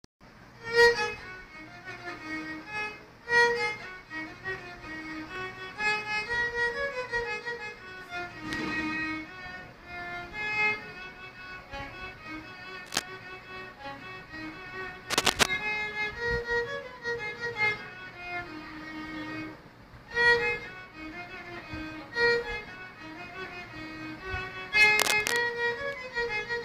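At 12.86 s, 15.10 s and 24.98 s, bursts of cable scratch noise cut in. Each lasts under half a second. They sound like scratchy, uneven rustling, about as loud as the sound itself, the second about 5 dB louder. The likely cause is a worn cable or connector being moved.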